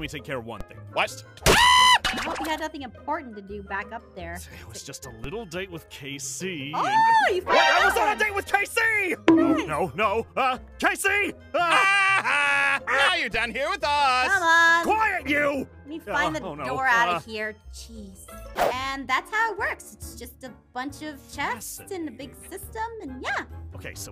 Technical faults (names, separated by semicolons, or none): DC step